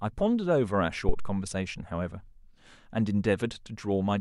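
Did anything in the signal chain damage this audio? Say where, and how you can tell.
Yes. A phantom power thump hits the analogue input at 1.09 s, a deep bump peaking near -12 dBFS. A supply step through the coupling capacitors decays within about 79 ms, ending by 1.44 s.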